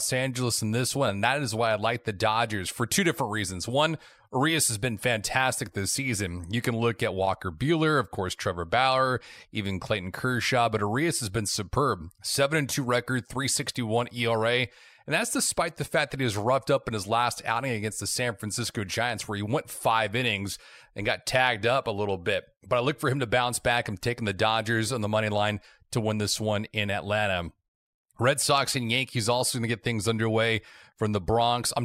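No technical faults can be heard anywhere in the recording.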